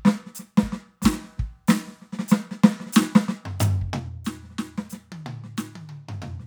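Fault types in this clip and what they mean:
Zipper noise: From 3.81 to 4.18 s the music drops about 15 dB. It falls in unsmoothed 3 dB steps, about ten per second. Each step clicks.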